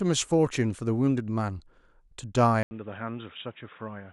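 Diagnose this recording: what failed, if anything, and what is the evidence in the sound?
At 2.63 s the speech drops out for about 80 ms, then returns dull and boxy until the end. After the gap nothing is present above 3.8 kHz. The level falls by a few decibels. A new background noise appears, roughly 30 dB under the speech. The stage is the capture device. The likely cause is an input switched to a poorer device, such as a headset call profile, with narrower bandwidth and its own noise.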